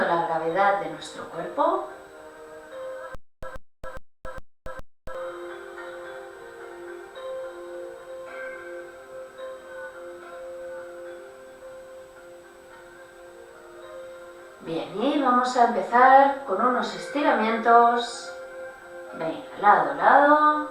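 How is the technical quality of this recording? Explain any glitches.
The recording has one glitch, a stutter with silent gaps from 3.15 to 5.15 s. Playback likely stalled, replaying its last 132 ms fragment at each retry before running dry. That burst repeats five times, every 412 ms, separated by 279 ms of dead digital silence, and the audio meant for those two seconds is lost.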